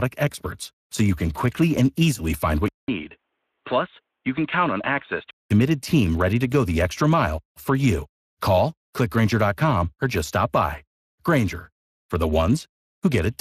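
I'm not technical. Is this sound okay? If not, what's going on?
No, it isn't fully okay. There are two problems.

The first runs through the whole clip. This is Speex codec damage. Speex is an older speech codec once common in internet calls and game chat. It squeezes the speech hard. What is lost is filled in with a rough, noise-like imitation. The result here is plainly audible. The speech sounds grainy and hoarse. Nothing is left above about 15 kHz, so the top sparkle is gone too.

The second problem sits between 2.68 and 5.51 seconds. The sound abruptly turns dull and muffled, as if heard through a phone. Everything above 3.8 kHz disappears. The level also dips, and a faint new background noise comes in. A short gap of about 0.2 seconds marks the change. The likely cause is an input switched to a poorer device, such as a cheaper microphone or a headset in call mode. After 5.51 seconds the fuller sound returns.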